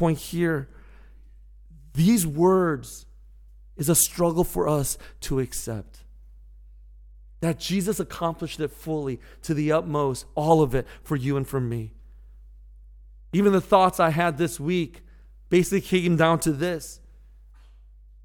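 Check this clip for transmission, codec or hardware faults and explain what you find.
There's one hardware fault here: mains hum running under the speech from start to finish. It's a steady low 50 Hz tone, sitting roughly 25 dB below the speech. That points to a ground loop or a nearby transformer bleeding the power line into the signal path.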